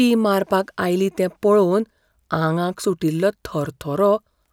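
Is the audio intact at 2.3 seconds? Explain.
Yes, at 2.3 seconds the speech plays through cleanly, with no dropout, click, distortion or other fault at that moment.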